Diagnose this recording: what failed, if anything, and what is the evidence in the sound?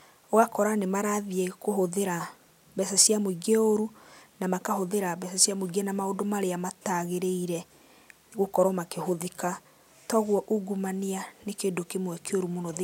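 Nothing failed; no stage shows any audible fault here.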